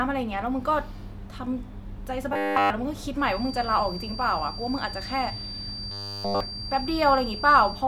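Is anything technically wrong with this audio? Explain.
Yes. From 2.33 to 2.70 s and 5.91 to 6.40 s there is robotic sound from repeated short buffers. Audio likely arrived too late, so a roughly 10 ms buffer was looped, turning the speech into a rigid 100 Hz metallic buzz. From 3.16 s to the end, a feedback whistle appears, likely from a loudspeaker-to-microphone loop sitting at the edge of feedback, giving a thin 4.7 kHz tone at one pitch that swells and fades slowly, around 10 dB below the speech.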